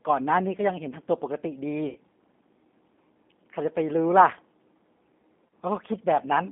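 G.729 codec damage runs throughout this speech clip: the sound is confined to roughly 200 Hz to 3.6 kHz and has a rough, synthetic edge, which fits an 8 kbit/s pulse-based vocoder. VoIP packet loss concealed by the speech codec occurs at 1.89–1.97 s and 5.48–5.51 s. The decoder stretches the last pitch and filter into a fading buzzy tone or coloured noise over gaps of 60 ms and 30 ms, consistent with two packets and then one going missing.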